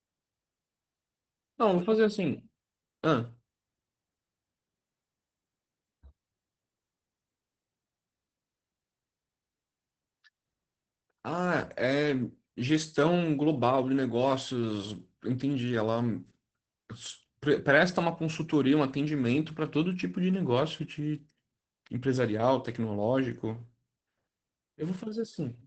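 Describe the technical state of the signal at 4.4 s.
At 4.4 s the speech carries Opus voice compression, present throughout. The SILK linear-prediction coder codes the excitation coarsely at what sounds like about 12 kbps in wideband, cutting everything above 8 kHz, so the speech is muffled, hoarse and faintly robotic, rather than just dull as with a plain low-pass filter.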